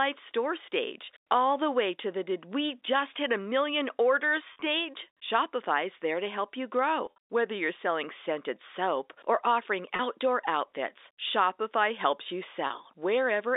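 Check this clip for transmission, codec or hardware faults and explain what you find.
Packet loss with pitch repetition breaks up the speech at 4.53 to 4.61, 7.06 to 7.18, 9.96 to 9.99 and 12.67 to 12.70 s. Missing stretches of 30 to 70 ms get patched by repeating the last pitch cycle, so you hear brief held, buzzy blips instead of gaps, all inside the narrow 300 Hz to 3.7 kHz telephone band of the G.711 line.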